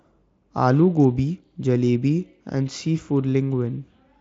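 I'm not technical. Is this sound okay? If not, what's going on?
Yes, it sounds fine.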